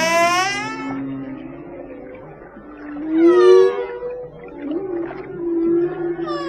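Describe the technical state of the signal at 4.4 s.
At 4.4 s the sound is pitched up by about one and a half semitones and runs roughly 9 percent fast (1.09 times speed). It sits inside a wrong sample rate span from 3.02 to 4.65 s. The samples are being played back faster than they were captured, with no conversion, so pitch and tempo rise together by the same ratio. That ratio fits 44.1 kHz material played out at 48 kHz.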